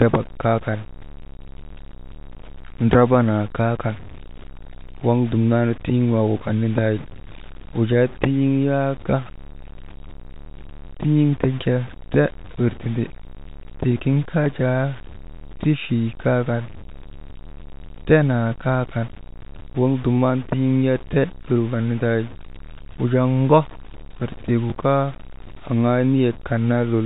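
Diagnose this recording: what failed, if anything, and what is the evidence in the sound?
Grainy, level-following distortion runs through the whole speech clip. Quiet passages turn rough, with error about 20 dB below the signal. The likely cause is low bit depth without dither at a sample-format conversion, roughly 6-bit truncation.

Packet loss with the last packet repeated appears twice on the network path, at 14.44 s and at 24.70 s, just after "wir tii gu". Each time, one 20 ms packet goes missing and the previous one replays. The repeat gives a small blip.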